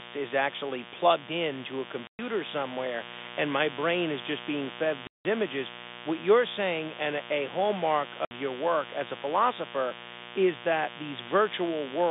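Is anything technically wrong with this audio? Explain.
Yes, there are two faults: mains buzz and packet loss filled with silence.

Mains buzz runs through the whole clip. Switching spikes from a dimmer, a rectifier or an unshielded run get into the signal path twice in every 60 Hz cycle. That produces a ladder of 60 Hz harmonics reaching well up the spectrum. The result is a steady, raspy buzz under the speech at about 10 dB below it, loud enough to stay noticeable throughout. Because the clip is telephone-band G.711, the buzz harmonics are confined to that band along with the speech.

Packet loss filled with silence shows up three times:
at 2.07 to 2.19 s (120 ms), after "actually plugged into a" and before "somewhere and my brain";
at 5.07 to 5.25 s (180 ms), after "is just being fed" and before "images what you're saying";
at 8.25 to 8.31 s (60 ms), after "saying and a hallmark" and before "your work as a".

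Blocks of audio never reached the receiver, which played plain silence instead of concealing the loss. Each gap is a whole multiple of 30 ms, which fits 30 ms packets. The speech simply drops out and resumes abruptly.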